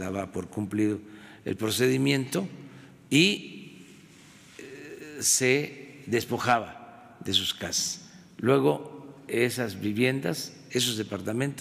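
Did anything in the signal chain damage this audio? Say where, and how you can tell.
No, nothing in the chain.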